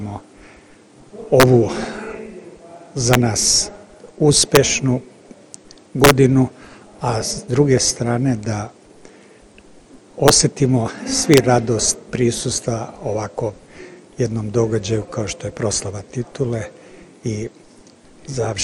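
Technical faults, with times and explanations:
1.40–1.43 s, 3.13 s, 4.55 s, 6.04–6.11 s, 10.28 s and 11.34–11.38 s: integer overflow. Peaks exceeding full scale by about 1 to 3 dB wrap to the opposite sign instead of limiting, giving violent cracks far harsher than the flattened, buzzy distortion of clipping.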